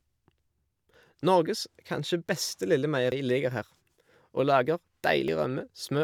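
At 3.12 s and again at 5.28 s the speech jumps forward by about 40 ms, likely a dropped buffer (overrun), with the missing samples spliced across.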